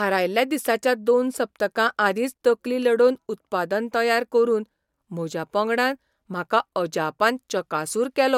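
No technical faults can be heard in this speech recording at any point.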